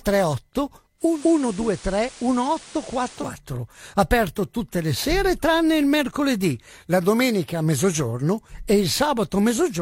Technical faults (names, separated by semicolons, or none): digital radio blending to analogue